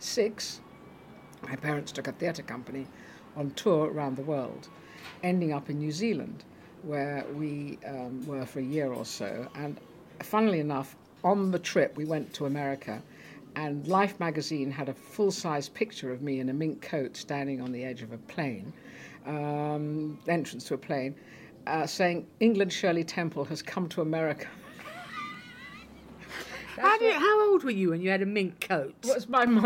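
Nothing in the audio comes across as a fault, so there's nothing here to pin to a time or trace back to a cause.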